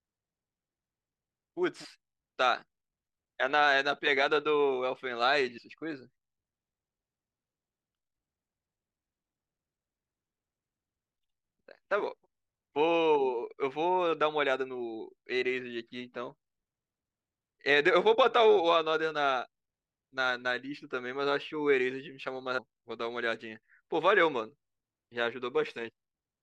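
Speech clip with compressed frames skipped at 5.57–5.59 s and 22.57 s. The audio jumps ahead about a tenth of a second, then nearly half a second. The jumps fit whole 21.3 ms frames dropped or rejected by the decoder.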